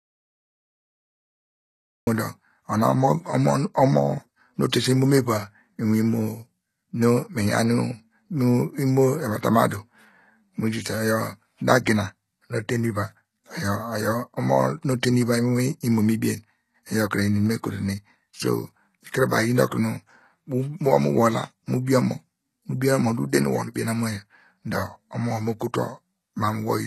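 Audio dropout to silence, from the very start until 2.07 s: the clip opens in silence, with no room tone at all, and the speech only arrives at 2.07 s. The silence is already under way when the clip begins, so whatever preceded it is lost. The likely cause is that the input went missing, through a disconnected device, a failed link or a stray mute, while the recorder kept writing empty samples.

HE-AAC compression, throughout the clip: the speech sounds heavily coded, and nothing is present above 12.3 kHz. This is likely HE-AAC, and the damage fits a low rate of around 16 kbps. At such a rate only the lower spectrum is actually coded, and the upper band is synthesised by copying lower bands upward under a coarse envelope. That treble is an imitation, with harmonics that fail to line up across the crossover, so sibilants come out gritty, metallic or lisping.

Pre-echo, at 4.70 s, right after "omo nu": a brief hiss of about 29 ms leads into a sharp onset. 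The attack landed late in a transform block, and the quantisation noise sized for the loud part spread across the whole block, including the quiet stretch before the onset. The onset itself sounds softened and smeared.

Pre-echo, at 21.85 s: the same block-spreading mechanism puts about 24 ms of noise ahead of an attack, so a short hiss runs in ahead of it and blunts its edge.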